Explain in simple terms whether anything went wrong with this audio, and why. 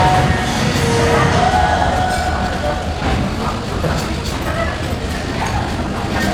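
From about 1.89 s to the end, the sound suddenly runs roughly 1.7 times faster while the pitch stays put, so it comes across rushed. That's a time-stretched section, likely software squeezing the audio to fit a length by dropping short slivers.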